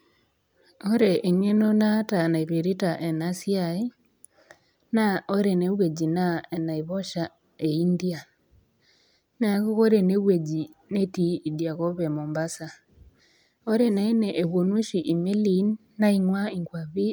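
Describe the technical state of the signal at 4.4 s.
The signal at 4.4 s is intact, with no audible fault at that moment.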